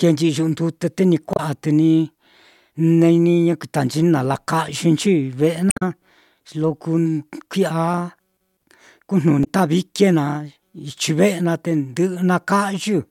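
Short glitches break into the speech at 1.33 to 1.40 s, 5.68 to 5.83 s (right after "yekuitanchi ni nalakayɨnchi ve'e") and 9.41 to 9.47 s. These are damaged data in a compressed stream: corrupted bytes made the decoder misread frames and lose sync until it found the next header.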